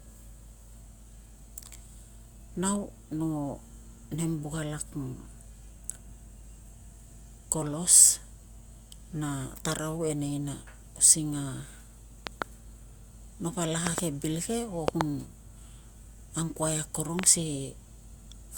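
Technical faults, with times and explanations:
12.27–12.44 s, 13.87–14.00 s, 14.88–15.03 s, 17.19–17.26 s: loud pop. Each is a quick double pop roughly 20–25 dB over the speech, which carries on underneath. It's likely a voltage spike from a plug, switch or static discharge.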